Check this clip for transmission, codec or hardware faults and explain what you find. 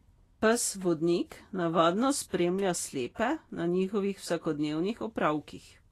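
One fault is present, lasting the full length of the speech. The likely cause is Vorbis compression. Throughout the clip nothing remains above 14.2 kHz, and the treble that survives below that cut-off is coarse and grainy, with a hissy texture and softened consonant attacks. At low quality, Vorbis keeps a smooth outline of the spectrum but quantises the high-band detail so roughly that it turns into noise of similar energy. The damage is plainly audible and points to a low bitrate, around 33 kb/s.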